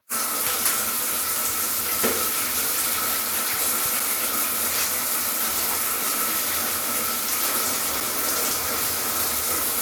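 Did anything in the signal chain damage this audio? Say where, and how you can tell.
Yes, a gap between chunks at playback or storage: hard-edged holes of about 6.5 ms at 4.00 s and 8.00 s, every 4.0 s, where chunks were joined with silence.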